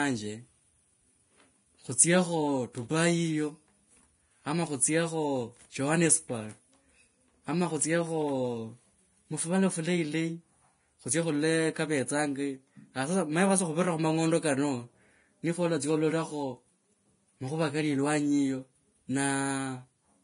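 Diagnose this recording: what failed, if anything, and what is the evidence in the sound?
Codec stage. The speech stops at 10.6 kHz throughout. Coarsely quantised treble sounds hissy and grainy. Likely heavy Vorbis compression, fitting roughly 30 kbps.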